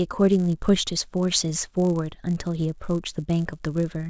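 Resampler restarted on every block, throughout the speech: each 10 ms block was converted on its own, which fits a 44.1 kHz to 16 kHz conversion, so every block edge carries a small error. The result is a 100 Hz buzz riding on the voice that falls silent in the pauses.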